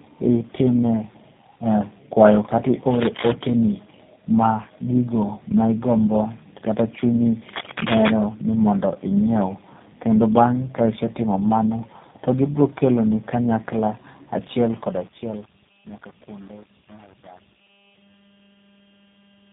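Tandem speech coding runs throughout the speech: the sound passes through three low-rate speech coders in a row, each re-coding the last one's damage. The result is rough, muffled and warbly, with nothing above 3.7 kHz.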